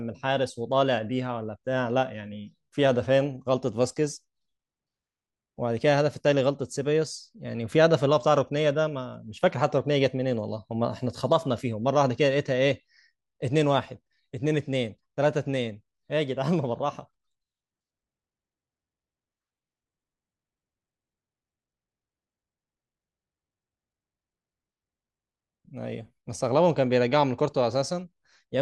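From 14.37 s to 15.75 s, the speech shows channel delay (comb filtering). One channel runs late by roughly a single sample, about 0.02 ms, before the two are summed to mono. The common signal cancels where the two copies arrive out of phase. With such a tiny offset, the first notch falls near 20 kHz. So there is no clear hollow comb. Instead the highest frequencies fade, and the speech sounds slightly dull and muted at the top.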